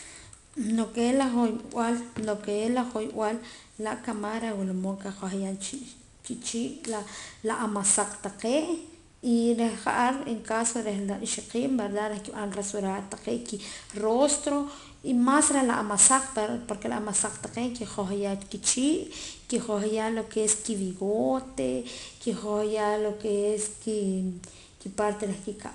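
It's a speech clip with 4-bit ADPCM compression throughout: gritty hiss riding every loud syllable, smeared attacks, and nothing above 10.6 kHz, which fits roughly 89 kbps at a low rate.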